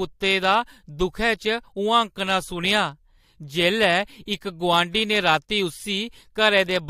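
Speech recording, no technical faults found.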